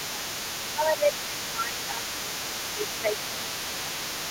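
From the start to the end at 4.3 s, a second, fainter voice sits under the talker, some 15 dB down. This is the other side's voice leaking through: it was likely played on the talker's loudspeaker and not fully removed by the echo canceller. Unlike room reverberation, which smears the talker's own speech, this is a separate voice with its own timing, present beneath everything.

Alongside that leak, the talker's speech is suppressed in double talk at 0.0 to 0.26 s, across a long stretch from 0.74 to 3.15 s, then at 3.32 to 3.51 s and 3.68 to 3.97 s. The level dips by around 10 dB. Both sides were speaking, and the echo canceller likely could not tell the talker from the echo, so it turned both down. Packet loss gives abrupt gaps, but these dips track the overlapping voice.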